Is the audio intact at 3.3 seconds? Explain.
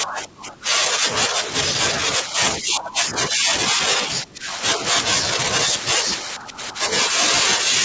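No: from 2.59 to 3.53 s the speech dips by up to about 15 dB, likely speech suppressed in double talk, the echo canceller attenuating the talker during overlap.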